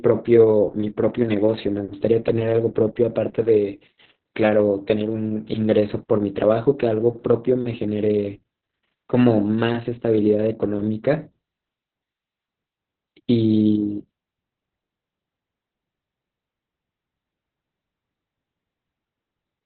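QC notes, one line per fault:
Throughout: Opus voice compression, speech muffled, hoarse and faintly robotic; spectrogram bare above 4.4 kHz with smeared harmonics, fitting narrowband SILK near 6 kbps.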